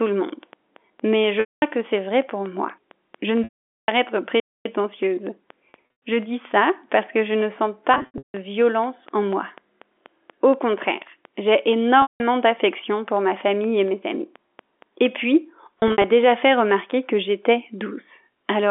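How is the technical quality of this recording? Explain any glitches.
The recording has three kinds of fault over a narrow telephone-band line, roughly 250 Hz to 3.5 kHz, consistent with G.711 mu-law coding.

A train of clicks runs from 0.06 s to 15.07 s. Something, likely interference or a struggling interface, injects a pulse at a steady 4.2 per second. The result is regular ticking, with peaks about as loud as the speech itself, audible through pauses as well.

Packet loss with pitch repetition occurs at 1.40 to 1.62 s, 3.44 to 3.88 s, 5.70 to 5.98 s, 7.94 to 8.34 s, 12.02 to 12.20 s and 15.80 to 16.04 s. Audio went missing, from 120 ms up to 440 ms per event, consistent with 20 ms packets. The receiver repeated the last pitch cycle and faded it out. Short gaps sound like a held, buzzy tone, and the 440 ms one fades to silence before speech cross-fades back.

A playback stall at 4.40 to 4.65 s, likely from the player starving for data or being blocked, cuts the sound off mid-flow for about 255 ms before it resumes.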